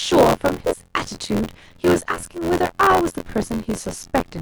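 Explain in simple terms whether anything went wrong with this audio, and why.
Something went wrong throughout the speech: buffer tearing. The program filling the audio buffer and the hardware playing it drifted out of step. About a fifth of each chunk replays sound from roughly 20 ms earlier. This makes a steady robotic buzz near 86 Hz, which fits a 512-sample buffer.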